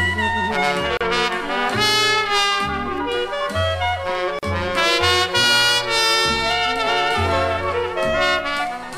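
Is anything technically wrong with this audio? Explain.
Yes, there's a gap at a join of encoded pieces twice: about 35 ms at 0.97 s and 40 ms at 4.39 s. Separately encoded chunks were butted together untrimmed, so encoder start delay and last-frame padding sit between them, and the sound drops out briefly before carrying on where it left off.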